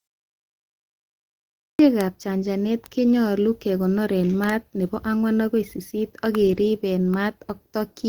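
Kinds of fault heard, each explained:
Clipped start after a pause: after 1.44 s of silence, the opening 352 ms of "ab chanchanet konyolu kekonor" is swallowed, because the output device was still waking up.
Bit error spike: two sharp, broadband ticks at 2.01 s and 2.86 s, the second between "ab chanchanet" and "konyolu kekonor en", from flipped bits making samples jump and snap back.
Lost packet rebuilt from error correction: around 6.47 to 6.57 s the sound turns briefly rougher and noisier, as lost packets were replaced by lower-quality backup copies, so there is no gap.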